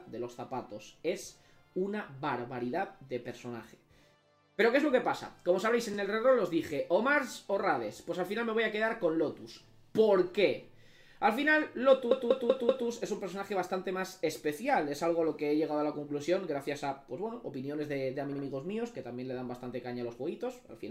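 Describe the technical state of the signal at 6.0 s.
A brief stutter runs from 5.94 to 5.97 s: repeated frames, where one 32 ms compressed block plays twice, stretching the audio by 32 ms.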